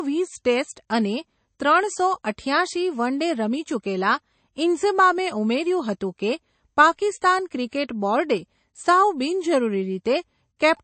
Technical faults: MP3 compression

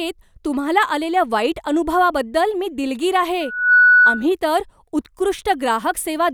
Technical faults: loudspeaker feedback squeal

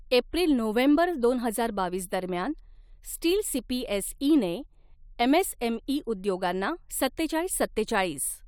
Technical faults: none

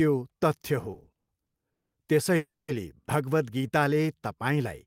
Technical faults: repeated stalls (stutter); call audio freeze; jitter buffer slow-down

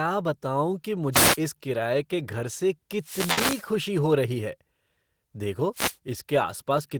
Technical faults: wireless microphone noise hit; burst of packet loss

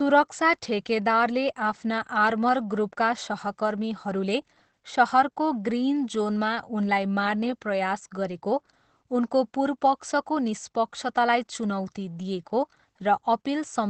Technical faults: Opus voice compression

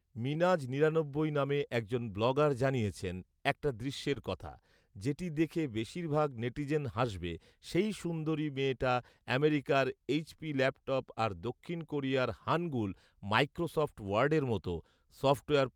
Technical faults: clock drift between sender and receiver; repeated timing corrections

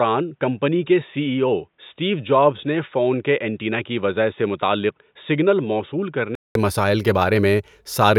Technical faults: input switched to a poorer device

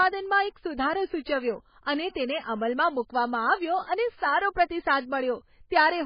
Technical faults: MP3 compression

